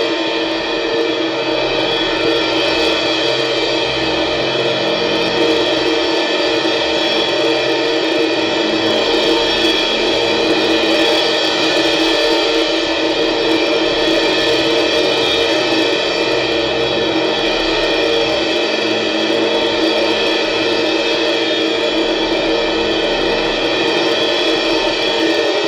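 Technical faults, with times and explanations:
Throughout, hard clipping: the music is pushed about 7 dB past what the stage can pass, so around one percent of samples get their peaks sliced flat. Those squared-off tops throw harmonics high up the spectrum, which is that gritty crackle riding the loud moments.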